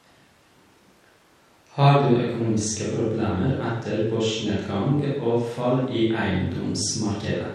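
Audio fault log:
No audible faults detected.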